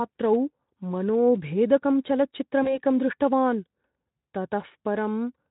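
A speech recording with a brief smear from 2.63 to 2.78 s, where the sound stretches into a buzzy tone or coloured noise that fades, and takes a moment to recover. This is VoIP packet loss concealed by the speech codec: about 20 ms of data went missing, which points to a single lost frame, and the Speex decoder, running at 15 kbps with only light coding roughness, filled the gap from its last pitch and filter, so the error carried on briefly after packets resumed.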